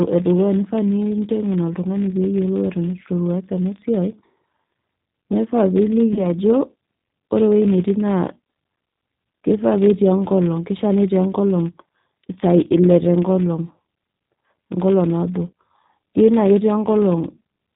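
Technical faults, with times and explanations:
Throughout: filter restarted on every block. Each block starts the filter from silence, adding a small transient, heard as a 50 Hz buzz that rises and falls with the speech level rather than staying constant like mains hum.
Throughout: G.729 codec. The speech is rebuilt at 8 kbit/s from a vocal tract model and sparse pulses, which is likely G.729A. It is band-limited below 4 kHz, with plainly audible rough, synthetic texture rather than smeared, watery artefacts.
6.13 to 6.26 s: VoIP packet loss concealed by the speech codec. One packet, about 30 ms, went missing and the decoder extended its last pitch and filter with a fading gain instead of leaving a gap of silence. The speech stays weak and distorted for a while after the stream resumes.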